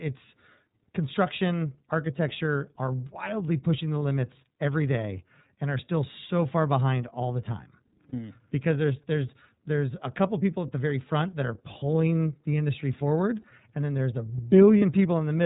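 A speech clip coded throughout with the iLBC codec, and the damage is plainly audible. Nothing above 4 kHz comes through. The voice sounds clear but rough and slightly synthetic. The 30 ms frame length fits the 13.33 kbps mode. There are also three dropouts, heard as lost iLBC frames, each about 30 ms long. They fall at 3.99 s, after "are wildly pushing the"; at 8.09 s, after "behind all the time"; and at 14.79 s, after "and then there's a". Each gap is filled by a brief held, buzzy vowel, which is the decoder repeating the last pitch cycle mixed with noise. The voice recovers right away because each frame decodes on its own.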